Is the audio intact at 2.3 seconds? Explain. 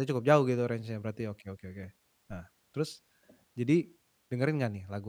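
Yes, at 2.3 seconds the speech plays through intact, with no dropout, click, distortion or other technical fault audible at that moment.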